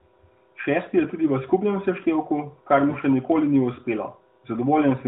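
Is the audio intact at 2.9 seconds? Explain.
No. From 2.90 to 2.97 s, between "v skupnem seštevku kar" and "še nikoli ni", there are lost AMR speech frames: a roughly 40 ms gap, consistent with two 20 ms frames, where the decoder repeats its last pitch and vocal-tract settings at falling gain, producing a brief smeared, fading dip in the narrowband sound.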